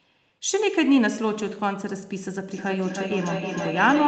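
Feedback echo between two devices starts at 2.5 s and runs to the end of the clip. A second device in the same room is playing this call aloud, and this microphone picks that playback up again. This device's echo canceller only removes its own output, so the speech returns at roughly a third of a second, thinner and ringing, and reaches about 3 dB below the direct speech. It all sits within a band capped at 8 kHz.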